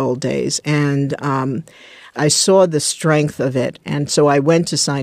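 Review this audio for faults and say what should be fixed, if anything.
No faults found; nothing needs fixing.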